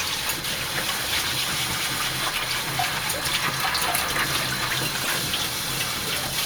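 At 5.04 s, a corrupt frame decoded: for about 0.11 s, running to 5.14 s, the everyday sound gives way to a harsh blip of misplaced energy. The length points to a few consecutive damaged frames whose flipped bits made the decoder apply wrong gains and misread codes, peaking around -10 dBFS. On a spectrogram it shows as a short, blocky patch of energy at the wrong frequencies; the waveform shows a brief, abrupt jump in amplitude.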